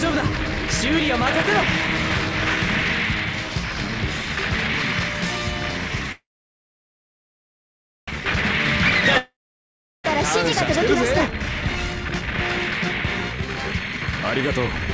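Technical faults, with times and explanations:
6.12–8.21 s, call audio freeze: the last sound fades out, then about 1.85 s of silence follows. Delayed packets likely emptied the jitter buffer, and the audio resumes where it stopped with nothing lost.
9.18–10.07 s, long network dropout: a brief fading fill gives way to about 0.72 s of silence. Audio likely stopped arriving, and it returns about 0.87 s further on, with that stretch gone.
12.71–14.24 s and 14.70–14.93 s, jitter buffer speed-up: the sound runs hurried at the same pitch, 130% and 134% speed. Short pitch-period pieces were trimmed, about half a second and a tenth of a second in total.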